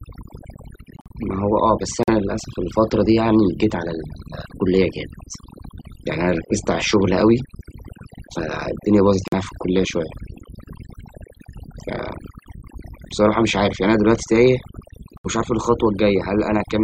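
Speech runs through the whole clip with overdone noise removal. A noise reducer was set too aggressively for a noisy recording. It pushes individual frequency bands down or out whenever they sit near its noise estimate. Soft parts of the voice fall with them. The background drops and breaks up, dotted with twinkling specks. On top of this are four runs of corrupt frames that were muted, fourteen frames in all. The sound cuts abruptly to silence at 0.96 to 1.12 s, 2.03 to 2.09 s, 9.28 to 9.34 s and 15.18 to 15.26 s. The gaps last 0.16, 0.06, 0.06 and 0.09 s. Each points to compressed frames with damaged bits that the decoder rejected. The player filled those frame lengths with silence. The timing around each hole stays intact.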